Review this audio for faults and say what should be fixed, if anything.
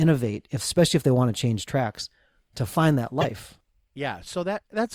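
A short glitch runs from 3.20 to 3.25 s, right after "tracks to find that". The sound jumps and garbles. A broken MP3 bit reservoir is the likely cause. Frames were dropped, so the next frame read borrowed bytes from the wrong frame, spanning roughly two 26 ms frames. To prevent it, cut or splice MP3 streams only with frame-aware tools that repair reservoir references, or decode before editing.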